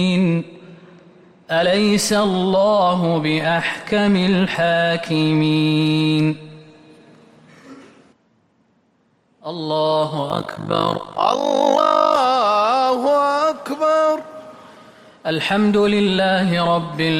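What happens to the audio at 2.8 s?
Nothing goes wrong at 2.8 s; the audio runs through that moment intact, with no dropout, click or distortion.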